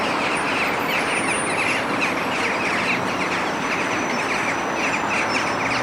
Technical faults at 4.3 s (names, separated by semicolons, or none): none